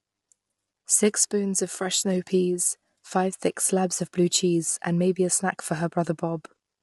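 Low-delay AAC compression runs through the whole clip. The speech sounds rough and grainy, with noise filling the gaps between harmonics and nothing above 11.7 kHz. The likely cause is AAC-ELD, whose short frames resolve pitch poorly, and the damage fits a bitrate near 32 kbps.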